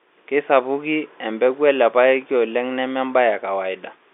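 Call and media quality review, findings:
No faults found in this speech clip. The G.711 telephone coding path is audible as narrowband line audio, roughly 300 Hz to 3.6 kHz, with only faint quantisation noise riding under the signal.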